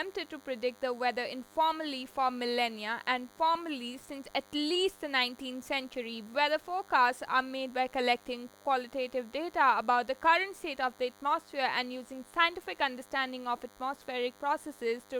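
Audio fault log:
Throughout, DECT cordless phone buzz: a thin, steady buzz sits under the speech, roughly 30 dB below it, from a nearby DECT handset or base whose 100 Hz radio bursts are rectified by the audio circuitry. A spectrogram shows evenly spaced horizontal lines at 100 Hz and its many harmonics.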